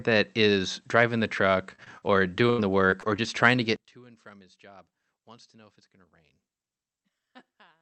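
From 1.71 to 3.20 s, packets were repeatedly lost or arrived too late, and the receiver covered each hole by stretching out the last sound it had. This is repeated packet loss (robotic sound). Seven gaps fall in that stretch, the longest 83 ms, and around a third of a second is rebuilt, about 15% of the span. The speech turns choppy, with small pieces dropping out in quick succession, all within the 8 kHz band of the Opus call path.

From 3.76 s to the end, the level falls by about 25 dB, which is the signature of one channel inverted, the likely cause. With one side's polarity reversed, everything shared by the two channels cancels when they are summed to mono. The centred speech and background nearly vanish, leaving a faint residue of whatever differed between the channels.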